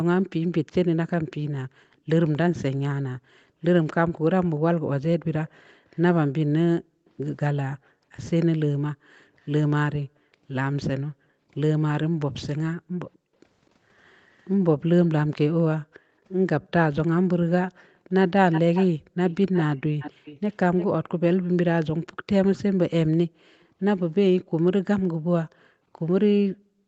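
From 1.67 s to 20.24 s the room background keeps getting pulled down while the far end's loudspeaker is active. That's the background gated by the echo canceller: it clamps the mic hard, up to about 40 dB at the deepest dips, so the ambience drops out in patches adding up to roughly four seconds before the canceller releases. From 23.27 s to the end it does the same again, with dips just as deep.

Between 5.48 s and 7.10 s there's a very faint repeat of the voice, about 40 dB down, trailing 247 ms behind. That's most likely an echo leak: the far side's canceller missed some of what its mic heard from its loudspeaker and sent it back. A stronger one runs from 18.52 s to 23.66 s, only about 15 dB below the speech and 341 ms late, so the doubled speech is much stronger than in the first one. All of it tops out at 8 kHz, which fits an Opus call at around 24 kbps.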